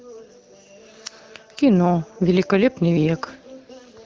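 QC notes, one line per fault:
No faults found; nothing to log.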